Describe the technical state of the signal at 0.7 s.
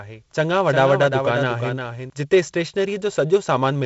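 At 0.7 s the speech carries a doubled audio track, already running when the clip begins and lasting until it cuts off abruptly at 2.1 s. The likely cause is the same signal reaching the mix twice, through a second, slower capture path or two copies left out of step. The result is a full-band repeat trailing the original by roughly 0.4 s at about 5 dB lower, with no decay or room colour.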